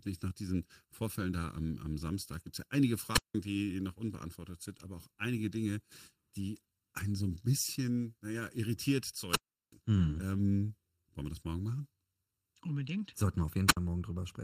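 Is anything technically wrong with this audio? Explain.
Yes. Throughout, the speech sounds hollow and phasey, with fixed spectral notches starting around 700 Hz. This is channel delay (comb filtering): one channel lags by under a millisecond, and summing to mono cancels evenly spaced frequencies.

At 3.11 to 3.35 s, just before "die noch unbeantwortet sind", at 9.27 to 9.75 s, just after "naja irritiert", and at 13.67 to 13.77 s, a brief hiss gives way to near silence lasting about 0.18 s, 0.37 s and 66 ms, and then the voice returns. This is wireless microphone squelch dropout: the radio signal faded until the receiver's squelch muted the output.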